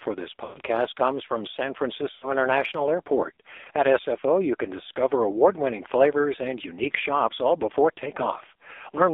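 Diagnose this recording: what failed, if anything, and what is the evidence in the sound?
Codec stage: the AMR narrowband mobile codec runs throughout. The speech is buzzy and synthetic, confined to about 300 Hz to 3.7 kHz, consistent with a low 5.9 kbps mode.

Network stage: lost AMR speech frames at 0.44 to 0.58 s and 2.12 to 2.32 s. The decoder repeats old settings, so the speech smears and fades, then returns rough.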